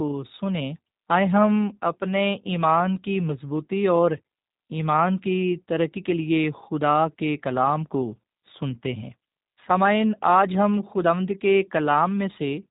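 The whole clip carries G.729 codec damage. Nothing above about 3.8 kHz survives, and the plainly audible rough, synthetic texture suggests an 8 kbit/s G.729A voice link.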